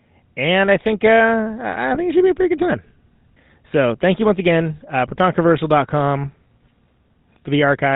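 Throughout, the speech carries the buzzy, gravelly texture of the GSM full-rate codec, which fits a 13 kbps link. A vocal-tract model driven by sparse, regularly spaced excitation pulses leaves plainly audible roughness, with nothing passing above 4 kHz.

GSM bit errors occur twice. From 1.94 to 2.01 s, between "I think uh I" and "it should be a", and again from 6.63 to 6.69 s, corrupted filter, pitch or gain values distort a few frames into short squawks and gargling pops.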